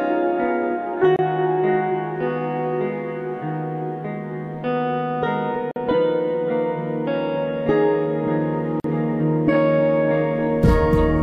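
Three brief silences cut into otherwise continuous audio at 1.16 to 1.19 s (about 28 ms), 5.71 to 5.76 s (about 48 ms) and 8.80 to 8.84 s (about 43 ms). Each is a gap at a join of encoded pieces, where separately encoded segments were spliced without trimming encoder start delay and final-frame padding. On a spectrogram each shows as a thin vertical empty band with slightly blurred edges, and on the waveform as a flat dropout before the sound resumes.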